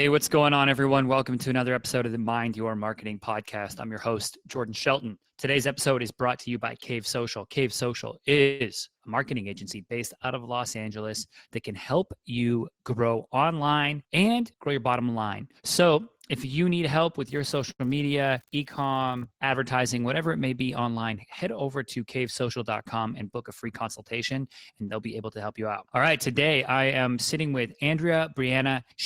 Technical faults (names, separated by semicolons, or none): call audio freeze; jitter buffer speed-up; unreliable data bit; short stall from a late packet